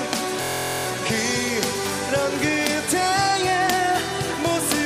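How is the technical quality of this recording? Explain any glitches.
A single glitch mars the recording. From 0.42 to 0.86 s a steady buzz at about 43 Hz replaces the sound: a system hang loop, where playback froze while the hardware kept replaying one 23.2 ms slice, which fits a 1024-sample buffer. Little or no audio seems lost.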